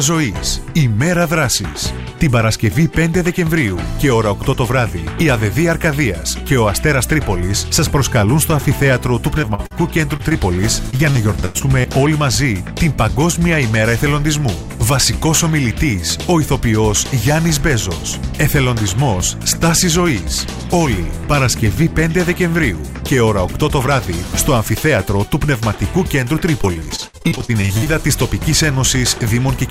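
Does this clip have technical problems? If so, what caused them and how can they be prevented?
Yes. Short concealed packet loss causes brief smears or wobbles at 9.41, 9.54, 9.66, 10.17, 10.29 and 10.33 s. Each is a 20 to 40 ms hole that the receiver patched by extending the preceding sound. These are isolated events, not a sustained pattern.

Repeated packet loss (robotic sound) runs from 10.91 to 11.86 s and again from 26.62 to 27.88 s. In these stretches, closely spaced holes of up to about 100 ms and then up to about 56 ms are patched one after another, so roughly a fifth and then a third of the audio is synthetic. That density is what makes these stretches choppy, unlike the isolated glitches.

Both come from packets arriving late or not at all. A more stable network connection, a larger jitter buffer and forward error correction would prevent them.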